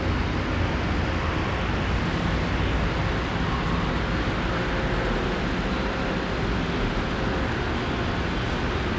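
No technical faults can be heard in these everyday sounds. They arrive over a working call path, with nothing above 8 kHz, which fits a wideband codec such as G.722.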